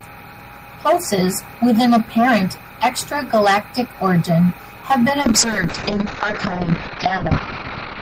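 At 5.22 s a call bitrate drop begins: the bandwidth estimate fell and the encoder switched to far coarser coding, which fits a fall from 32 to 9 kbps. Audio above 6 kHz vanishes and the speech turns rough and muffled through to the end.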